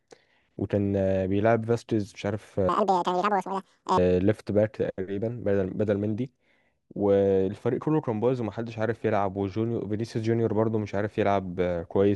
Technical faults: section at the wrong speed

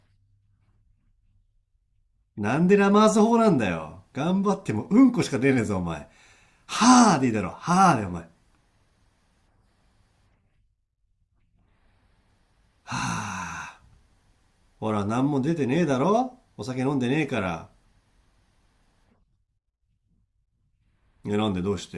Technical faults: none

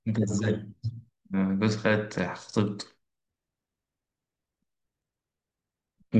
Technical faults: none

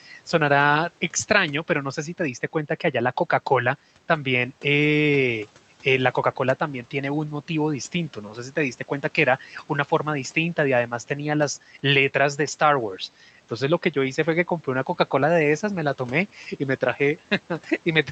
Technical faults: speech cut by the noise suppressor

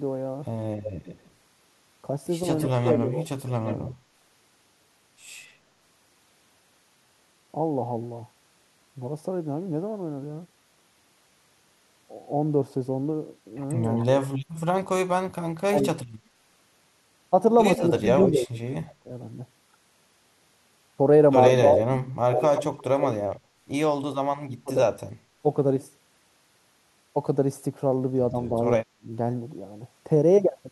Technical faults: echo leak; speech suppressed in double talk

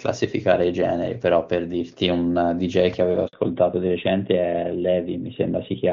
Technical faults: handover gap; fallback to narrowband

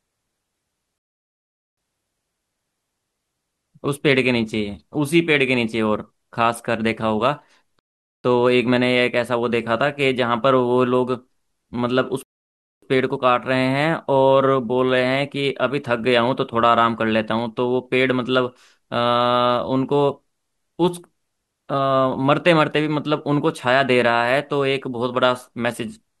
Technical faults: rebuffering stall

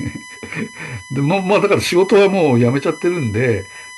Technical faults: USB whine

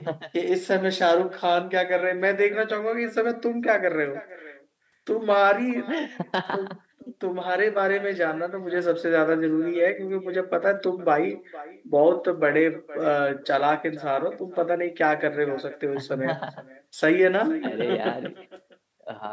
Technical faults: echo with no canceller

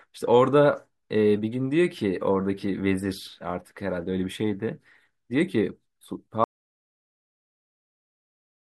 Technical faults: audio dropout to silence

